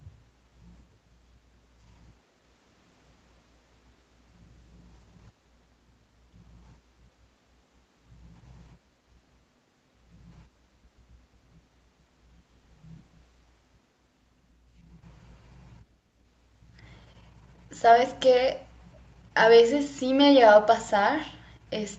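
At 18.94 to 18.98 s a brief, very faint delayed copy of the speech surfaces, trailing the original by about 424 ms. This is likely an echo leak: a far-end loudspeaker's echo canceller let a scrap of returned speech through, audible against audio band-limited at 8 kHz.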